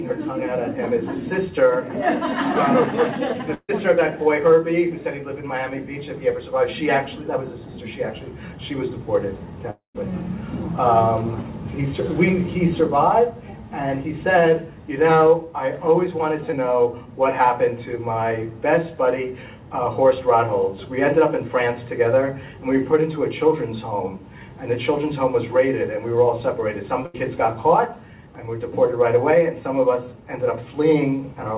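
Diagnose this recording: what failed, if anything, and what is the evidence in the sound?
Network stage: burst of packet loss at 3.54–3.71 s and 27.06–27.16 s. The last sound is stretched and fades, then audio resumes with roughly 140 ms and 80 ms missing.

From 9.71 to 9.96 s the sound is held, fades, then drops to silence for about 130 ms. That's likely a long network dropout, losing around 240 ms.

Short concealed packet loss at 16.50–16.54 s: a quick smear where the decoder patched about 15 ms by continuing the previous sound, all within the 4 kHz-limited call band.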